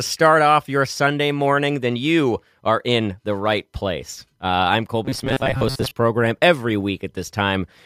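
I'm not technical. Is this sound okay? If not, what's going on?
No. From 5.05 to 5.91 s there is robotic sound from repeated short buffers, a flat metallic buzz near 133 Hz. Audio likely arrived too slowly, so the player looped tiny 7.5 ms snippets for about half that stretch, skipping the real speech.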